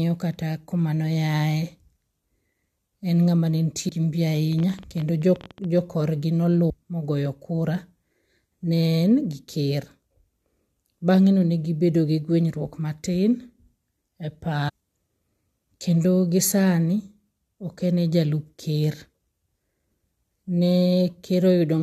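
At 3.88 to 3.90 s, just before "gi mbi", there is a short glitch from damaged data in the compressed stream. From 4.53 to 5.65 s, right after "gi mbi", a train of clicks ticks over the speech. There are about twenty clicks at roughly 17 per second, unevenly spaced, and they peak at about the level of the speech. The likely cause is interference or a faulty connection or power supply. Two more brief blips from damaged compressed data follow, at 6.69 s and at 14.68 to 14.70 s. In each, corrupted frames made the decoder lose sync and skip to the next frame header.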